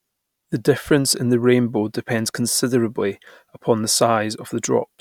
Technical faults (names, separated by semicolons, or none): none